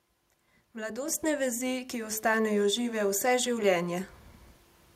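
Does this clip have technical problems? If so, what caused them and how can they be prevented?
Yes. A microphone volume step-up occurs at 1.08 s, where the whole signal jumps abruptly by about 6 dB. The speech and the background noise rise together, which shows the change happened at the input stage rather than in the talker's delivery: the call software judged the microphone too quiet and raised the device's input volume in a single step. Disabling automatic microphone gain adjustment and setting a suitable input level beforehand prevents this.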